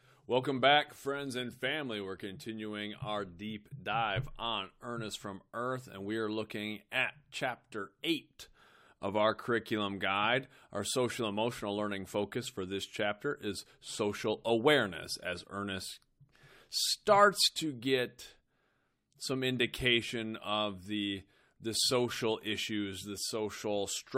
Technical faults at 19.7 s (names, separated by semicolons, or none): none